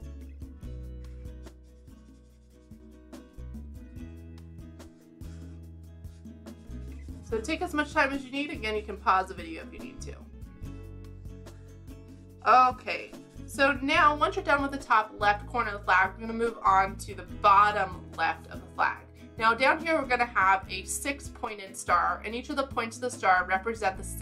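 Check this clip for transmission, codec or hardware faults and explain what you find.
There are three short level drops, and they fit one channel dropping out. They run from 1.48 to 2.8 s, from 10.14 to 10.33 s, and from 21.45 to 21.67 s. Each time the level falls abruptly by about 6 dB, then snaps back. The likely cause is one stereo channel going silent while the other continues. Once the two are summed to mono, shared content halves, and anything carried only by the lost side vanishes.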